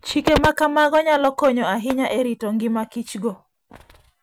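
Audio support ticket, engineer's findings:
Hard clipping, 0.27–1.49 s, speech. Harsh fuzz on every loud syllable. Input roughly 22 dB over what a gain stage or converter passes. Peaks cut flat. Flat tops add high harmonics. Check preamp gain and converter headroom.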